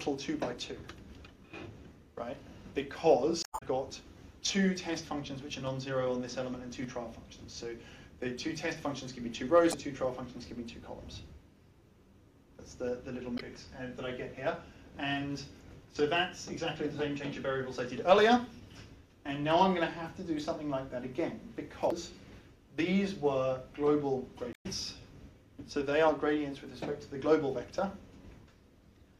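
At 3.41–3.63, 9.70–9.75, 13.35–13.41, 21.88–21.92 and 24.52–24.66 s, damaged data in the compressed stream makes the decoder misread frames and lose sync, giving brief chirps or squawks. On a spectrogram these appear as short broadband smears; in the waveform, abrupt discontinuities.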